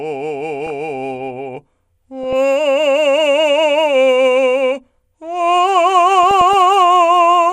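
Music with DAB burbling at 0.62–0.70 s, 2.23–2.33 s and 6.23–6.54 s: bit errors slipping past error correction corrupt the MP2 data, so wrong samples put short blips of noise into single sub-bands. A spectrogram shows scattered, blocky bright patches in isolated frequency bands.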